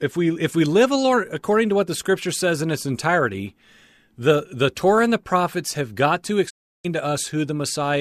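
At 6.49 s the speech fades out over about 20 ms and goes silent until 6.86 s: a digital broadcast dropout. The receiver lost valid frames and muted, so roughly 336 ms of transmitted audio is missing, not just quieted, before the signal resumes.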